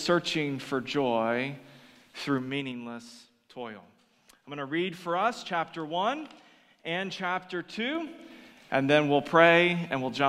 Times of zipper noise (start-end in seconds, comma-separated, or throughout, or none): 2.33-2.77, 7.89-8.36